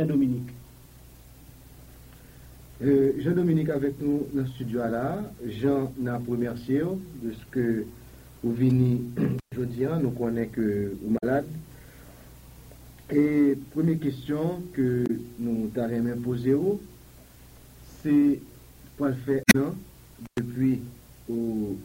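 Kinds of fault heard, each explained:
Damaged data in a compressed stream: Four short glitches break up the audio, at 8.66 to 8.69 s, 11.14 to 11.24 s, 15.03 to 15.10 s and 19.42 to 19.56 s, each lasting well under a fifth of a second. Part of the encoded stream is corrupt there. The decoder misreads those frames, loses its place and hunts for the next valid frame header, so a garbled burst replaces the real content.
Intermittent contact: The sound drops out twice, from 9.39 to 9.52 s and from 20.25 to 20.39 s, with crackle where the dropout begins and ends. The gaps last about 119 ms and 103 ms, and faint hiss is left while the signal is missing. A loose plug or cable briefly lost its connection, breaking the signal path until the contact closed again.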